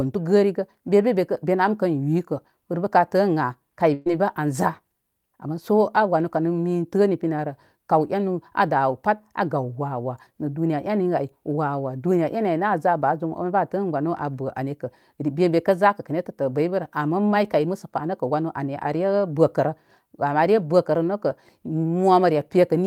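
At 3.93 to 4.08 s the speech smears into a brief held buzz or fading hiss, then jumps ahead: a burst of packet loss, with about 120 ms concealed and skipped.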